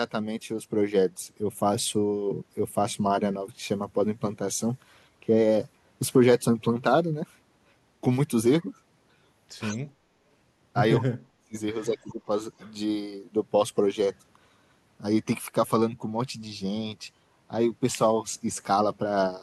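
Speech with an echo leak at 9.72–9.77 s, 12.09–12.13 s and 12.59–12.72 s: brief copies delayed by 189 ms, roughly 20–30 dB down, likely from a far-end loudspeaker incompletely cancelled. Speech suppressed in double talk at 11.0–11.55 s (dipping about 40 dB) and 11.87–12.21 s (about 15 dB), likely the echo canceller attenuating overlapping talk.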